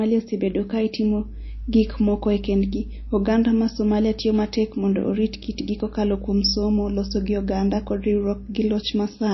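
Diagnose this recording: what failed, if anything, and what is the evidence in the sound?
Throughout the speech, nothing survives above 5.8 kHz and watery, swirly artefacts flicker, unlike a clean low-pass. The stage is the codec, likely MP3 compression starved of bits.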